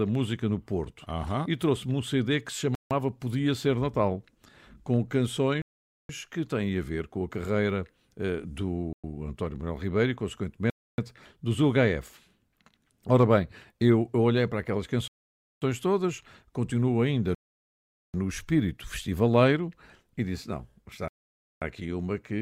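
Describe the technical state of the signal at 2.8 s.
The speech drops to dead silence from 2.75 to 2.91 s, about 160 ms, then resumes; likely a Bluetooth stall, the headphone buffer running dry while delayed packets were resent.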